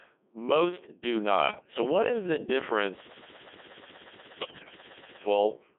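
The whole clip runs through a Codec 2 vocoder, likely around 1.6 kbit/s, band-limited to 250 Hz–3.5 kHz. The speech is rebuilt from sine waves, so it sounds heavily robotic and buzzy. Bit errors on digital voice radio hit from 1.48 to 1.74 s and again, harder, from 4.40 to 4.78 s. Corrupted frame parameters make the voice lurch in pitch and level and dissolve into warbly gibberish.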